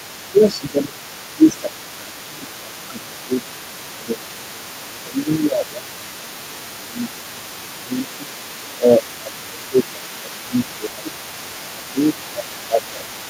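From the very start and for the whole clip, a second voice sits faintly behind the main speech, about 20 dB down. This is the other side's voice leaking through, likely because the far end is playing on a loudspeaker and the echo canceller is not fully removing it from the microphone signal.

Overlapping with that leak, the main speech is repeatedly pulled down in level, in four stretches: 0.32 to 4.54 s, 4.93 to 8.31 s, 8.78 to 11.09 s, and 11.73 s to the end. This is speech suppressed in double talk, likely the echo canceller failing to tell the local talker from the loudspeaker echo while both are active, so it attenuates everything. The dips reach roughly 15 dB in the first, third and fourth stretches and around 10 dB in the second. The speech sounds pushed back and uneven for about three seconds in each of the first two stretches and about two seconds in the third.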